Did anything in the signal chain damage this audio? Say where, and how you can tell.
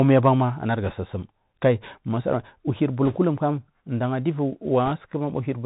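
Yes. The audio went through the Bluetooth CVSD headset codec for its whole length. Nothing above 4 kHz survives, a granular hiss sits under the speech, and s sounds turn scratchy. The codec tracks the waveform one bit at a time with an adapting step, which fits a 64 kbit/s CVSD stream. Fast, loud high-frequency content outruns that step and distorts.

There are also bit errors on a Bluetooth voice link, in three bursts at 0.85 to 0.94 s, 3.05 to 3.16 s and 4.86 to 4.92 s. Each burst adds a brief rushing crackle rather than loud clicks. The error rate is around 1.5 to 2 percent, which points to radio-link trouble. No click stands out because each flipped bit moves the decoded waveform by one step, sized to the speech level, and the effect then decays.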